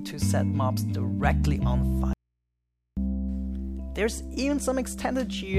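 At 2.13 s the audio cuts off abruptly and stays gone until 2.97 s, about 0.83 s later, before returning mid-flow. This is an audio dropout to a faint residue. The wanted signal was likely lost upstream while the path after the break stayed live. The gap holds only mains hum from the open input, around 55 dB below the normal level. The sharp edges at both ends rule out a pause or a fade.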